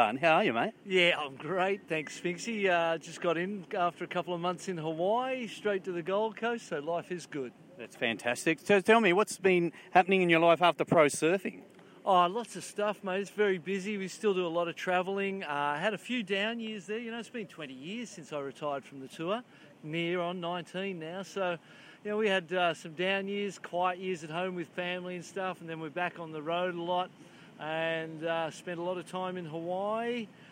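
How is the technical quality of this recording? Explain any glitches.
Nothing in this recording stands out as a glitch, and it comes across as sound that simply runs without any technical trouble to explain.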